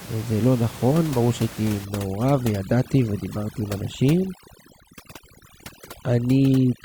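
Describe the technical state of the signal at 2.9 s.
At 2.9 s the signal is under overdone noise removal, running from 1.85 s to the end. Bands near the reducer's noise estimate are pushed far down or off, so room noise about 17 dB below the speech drops and breaks up into twinkling specks, and quiet speech detail goes with it. A spectrogram shows scattered flickering dots and holes in the harmonics.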